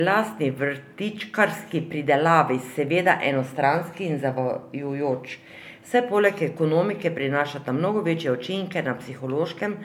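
Speech with generation loss throughout. It sounds swirly, hollow and smeared, with blurred attacks. It was likely re-encoded about three times through an MP3-type codec near 128 kbit/s.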